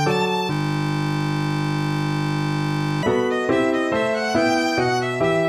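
From 0.53 to 3.03 s a system hang loop repeats one 20 ms buffer, giving a steady 50 Hz buzz. The waveform shows identical repeating blocks, and the spectrogram shows even harmonic lines.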